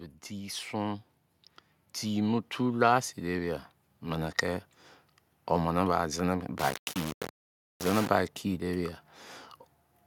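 At 0.28 s, automatic gain rising begins. The level climbs by about 3 dB until 1.11 s. The gain control judged the input too quiet and pushed it up. The speech and the background noise swell together. A second rise runs from 2.02 s to 4.45 s. This one is slower and larger, about 5 dB. The room tone grows along with the voice.

From 6.58 s to 8.08 s the speech turns grainy and rough. The distortion follows the voice and shifts as it moves. Quiet parts go gritty or sputter between coarse steps. The error sits only about 10 dB below the speech, so it is loud. The likely cause is low bit depth without dither. The samples seem rounded to very few levels, which fits a 5-bit signal.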